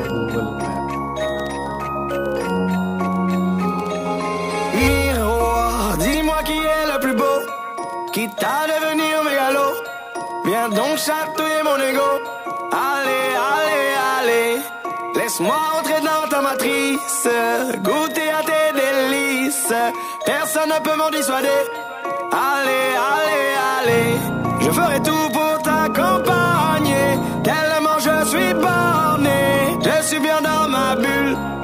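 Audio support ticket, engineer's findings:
Three short glitch bursts, each about 44 ms: 6.10–6.15 s, 9.29–9.33 s, 12.42–12.47 s. Roughly 3.1 s apart. Symptom: brief chirp, squawk, click or short hole breaking the audio. Fault: damaged data in a compressed stream. Probable component: decoder input, i.e. the file or stream bytes. Mechanism: corrupted bytes garble the affected frames. Decoder misreads or drops them, loses sync, then resyncs on the next frame header. Check source file integrity and transport.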